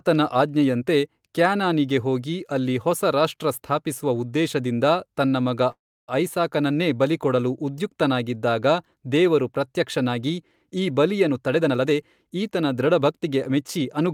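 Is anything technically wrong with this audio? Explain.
Yes. There are two kinds of fault in this speech clip.

A call audio freeze runs from 5.71 to 6.10 s, just before "ಐಸಾಕನನ್ನೇ ಬಲಿಕೊಡಲು ಉದ್ಯುಕ್ತನಾಗಿದ್ದಾಗ ದೇವರು". The sound stalls for about 365 ms, and roughly 310 ms of that is silent. Then the speech resumes where it stopped, and nothing is lost. The likely cause is delayed packets draining the jitter buffer, so the receiver padded the gap. Everything after it arrives 365 ms later.

There are two jitter buffer speed-ups. The first runs from 11.27 to 11.92 s, right after "ಉದ್ಯುಕ್ತನಾಗಿದ್ದಾಗ ದೇವರು ಪ್ರತ್ಯಕ್ಷನಾಗಿ ಈ". It plays at 131% speed and trims about a fifth of a second. The second runs from 12.35 to 14.08 s at 108% and removes around 150 ms. The receiver had too much audio queued. It cut many tiny pitch-period slices to reduce the delay. The pitch stays the same, but the speech sounds hurried.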